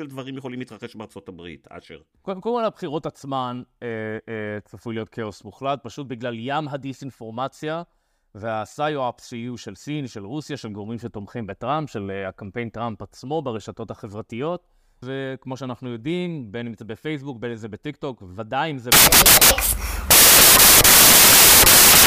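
A speech recording runs cleanly until 18.92 s, when a wrong sample width fault takes over and lasts to the end of the clip. From that point the playback side groups the bytes into samples of the wrong size, which fits 16-bit data being read as packed 24-bit. Most resulting values mix bytes from neighbouring samples, so the sound turns into loud noise with the speech faintly buried in it. Because each three bytes now count as one sample instead of one and a half, that buried speech also plays 1.5 times too fast and correspondingly higher in pitch.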